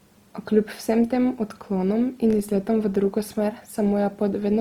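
From start to end, the speech carries plainly audible Opus compression damage, likely from its music mode at a low rate near 24 kbps. It sounds rough and grainy rather than swirly like MP3, and the bandwidth stays full, reaching up to 20.2 kHz.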